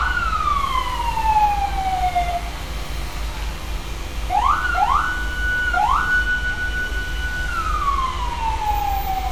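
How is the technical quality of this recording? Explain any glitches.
The recording is noticeably degraded throughout by one fault. Generation loss runs the whole clip. The sound is swirly, smeared and hollow, with blurred attacks and nothing above 18 kHz, likely from several lossy re-encodes, consistent with WMA around 96 kbit/s, each adding fresh quantisation noise.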